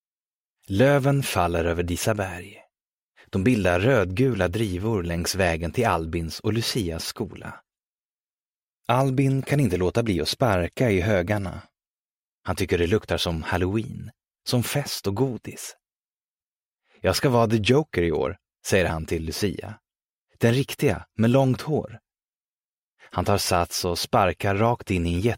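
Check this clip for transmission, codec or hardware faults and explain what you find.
No transmission, codec or hardware faults can be heard anywhere in the clip. Nothing in it points to a problem in the chain that carried or recorded it.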